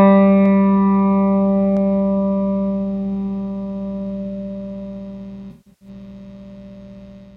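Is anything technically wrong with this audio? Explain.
Yes, there are two kinds of fault.

At 0.46 s and again at 1.77 s there are dropped samples. Each time the stream most likely lost a tiny fraction of a millisecond of data, so the waveform jumps from one value straight to a later one with nothing in between. That gap is far too brief to remove any audible sound. What you hear is a single sharp click, and a spectrogram shows it as a thin vertical line running up the whole spectrum.

Between 5.51 and 5.88 s there is AAC frame loss with concealment. About 256 ms of coded audio is missing, scattered over roughly 300 ms, and the gaps point to around a dozen lost frames, the longest run of them close to 150 ms. For each missing frame the decoder rebuilds an estimate from the last good spectrum rather than leaving a hole. The result is a smeared, noisy, phasey patch in place of the real detail until clean frames resume.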